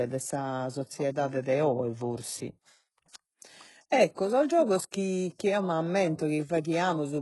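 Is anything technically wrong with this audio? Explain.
Yes. Throughout the speech, s sounds come out gritty and metallic, pointing to very low-bitrate coding, likely HE-AAC compression, with treble copied upward from lower bands. A spectrogram shows blocky, repeated texture up to a hard ceiling at 11.5 kHz.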